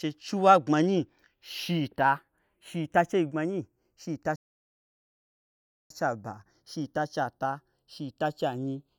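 The two channels were captured on devices running from separate clocks, mismatched by something like 40 parts per million, so the delay between them creeps steadily across the whole speech clip and reaches only a fraction of a millisecond by the end. This is channels drifting apart: summed to mono, the left and right copies cancel at comb-notch frequencies that slide slowly through the spectrum, giving the voice a gradual, hollow flanging sweep.

At 4.36 s the player likely ran out of data or had its output thread blocked, a playback stall. The audio cuts to silence mid-flow for about 1.54 s, then resumes at 5.90 s with "chei aba".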